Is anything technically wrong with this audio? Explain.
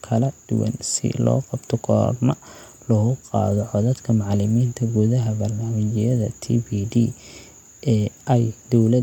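No technical faults are audible.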